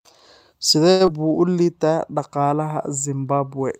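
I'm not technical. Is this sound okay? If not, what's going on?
No. There are three short glitches, all close together in the first second and a half of this speech.

At 0.91 to 1.02 s there is a short stall from a late packet. A piece of the call arrived late, so the phone had nothing new to play and held the last sound for about 85 ms until it showed up. Nothing is lost, but that sound is stretched slightly, and the call's delay grows by those 85 ms.

At 1.06 to 1.09 s there is a short concealed packet loss. About 40 ms of audio never arrived in time. The receiver covered the gap with roughly 13 ms of made-up sound continuing the previous sound, then skipped ahead. The result is a brief smear or wobble with a sliver of speech gone, and the delay comes back down by roughly 30 ms.

From 1.22 to 1.53 s there is a jitter buffer slow-down. The receiver was rebuilding its safety margin, so it repeated tiny slices of the sound over and over, adding 35 ms in total. 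The speech plays at about 91% speed without changing pitch, so it sounds briefly drawn out just before "liitaa dhaqaalaha".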